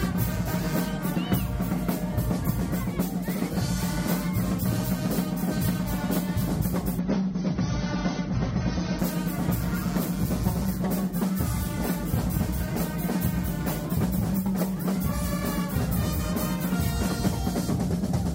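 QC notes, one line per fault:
6.99–8.99 s, adaptive stream at a lower bitrate: the treble suddenly vanishes above 6.3 kHz and the sound turns thinner and grainier, then full quality snaps back with no gap. The player briefly switched to a leaner encode, which fits a drop from roughly 96 to 24 kbit/s AAC.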